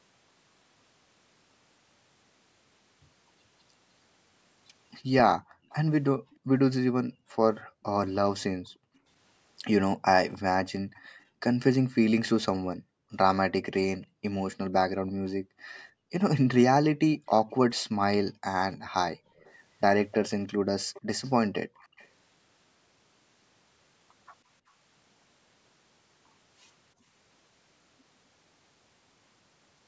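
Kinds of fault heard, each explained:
Background gated by the echo canceller: while the loudspeaker is playing, the canceller clamps the mic down hard, so the room tone here dips by as much as about 40 dB between 5.39 and 27.08 s, roughly four seconds in all, before coming back.
Echo leak: a faint copy of the speech trails about 305 ms behind, well below the main level, from 5.7 to 6.36 s and again from 10.29 to 22.08 s, likely because a loudspeaker-side echo canceller let some of its mic pickup slip back.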